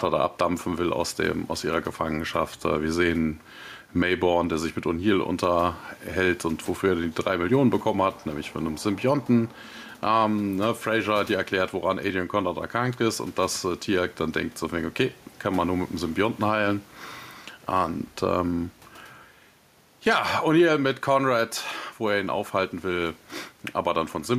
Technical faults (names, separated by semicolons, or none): gain pumping